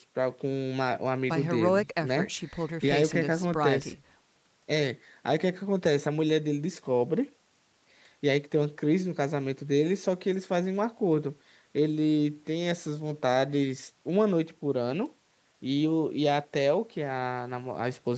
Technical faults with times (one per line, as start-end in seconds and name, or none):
none